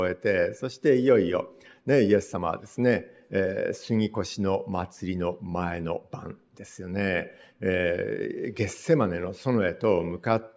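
Nothing stood out as a technical fault on listening.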